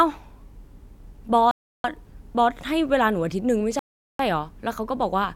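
Bluetooth stalls at 1.51 s and 3.79 s: the speech drops to silence for 0.33 s, then 0.40 s, likely because interference held up packets and emptied the headphones' buffer.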